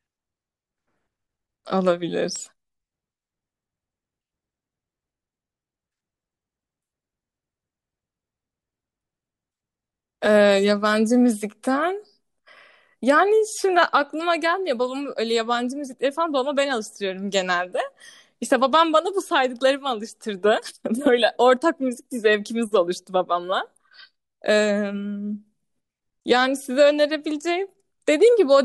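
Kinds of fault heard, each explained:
CD scratch ticks: A scratch on the disc wipes out more data than error correction can rebuild, once per revolution, so the player patches or mutes the gap. Here that's four tiny ticks, each no longer than about a millisecond, between 2.36 and 3.19 s.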